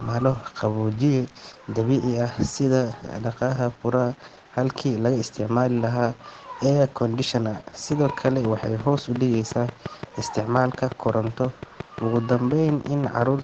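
Throughout the speech the sound is muffled and hoarse, with nothing above about 9 kHz. This is Opus voice compression: the SILK coder works in wideband and codes the excitation coarsely, which fits a bitrate around 12 kbps.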